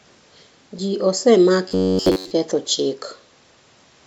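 From 1.68 to 2.31 s, audio likely stopped arriving in time, so the playback side kept looping its last short buffer instead of the real speech, producing robotic sound from repeated short buffers. The repeats impose a fixed buzz of about 94 Hz, which fits a buffer of roughly 10.7 ms replayed back to back, and essentially the whole stretch is made of these copies. The speech becomes a rigid, metallic drone that only loosely tracks the syllables, then recovers once fresh audio returns.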